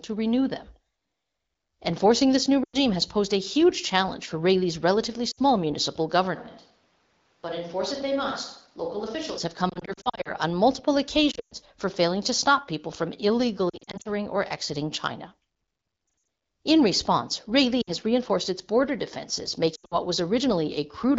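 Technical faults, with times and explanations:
2.64–2.77, 5.31–5.39, 9.69–10.31, 11.31–11.54, 13.69–14.08, 16.07–16.27, 17.81–17.91, 19.75–19.96 s, lost AMR speech frames: between 60 and 260 ms of speech goes missing in each event. The decoder stretches the last good frame with falling gain, so the speech warbles or dips. The 120 ms run at 11.3 s fades almost to silence.
6.37–9.37 s, switch to a distant microphone: the level drops by about 10 dB, and the speech turns hollow and roomy, with background noise only about 35 dB below it. This likely means the close microphone dropped out.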